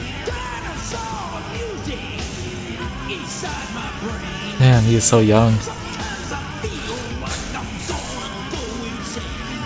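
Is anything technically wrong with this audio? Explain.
No, nothing stood out on listening, and the audio sounds as expected for a G.722 call path at 64 kbps, with nothing above 8 kHz.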